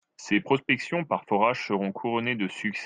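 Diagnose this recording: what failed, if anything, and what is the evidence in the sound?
Nothing in the signal chain failed: the speech arrives continuous and intact, with no breaks, level disturbances or added noise anywhere along the path from capture to playback.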